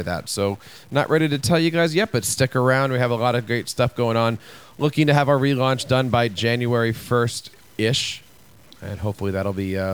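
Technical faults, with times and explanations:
Throughout: stuck bit. The speech carries a grainy noise, and the pauses are not silent but filled with a gritty noise floor that follows the waveform's small swings around zero. This is likely one data bit held fixed, so about half the samples are pushed off by that bit's weight. Here the error step sits at about -45 dBFS, which points to a fairly low bit.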